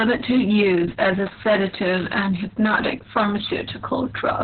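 Throughout, Opus voice compression in narrowband SILK mode leaves speech muffled, hoarse and robotic, with nothing above 4.3 kHz on the spectrogram, consistent with roughly 6 kbps.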